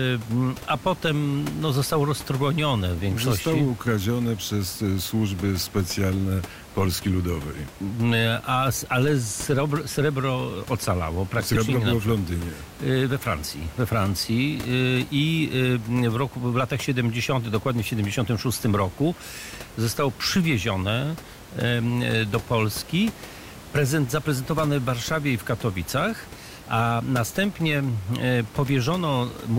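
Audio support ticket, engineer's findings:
No faults found in the speech recording. Room noise is audible in the background, about 18 dB below the speech, and belongs to the recording environment.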